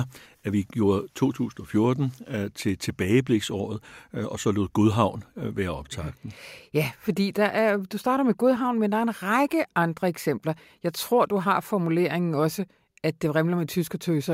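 Nothing in the recording stood out as a technical problem when listening to it.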